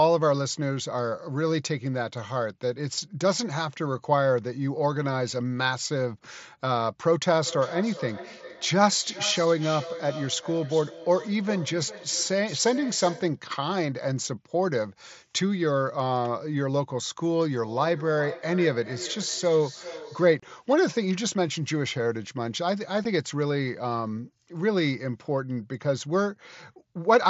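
From 7.43 to 13.48 s and again from 17.57 to 20.56 s, feedback echo between two devices appears. A second device in the room replays the call and its microphone sends it back, beyond the reach of either echo canceller. Each phrase returns roughly every 0.4 s at about 13 to 14 dB below the speech, thinner and ringing.

Unconcealed Bluetooth headset packet loss then cuts 30 ms of audio at 20.40 to 20.43 s, which points to about four lost mSBC frames, and a single short gap at 23.04 s. Each gap is a hard-edged silent hole that can click.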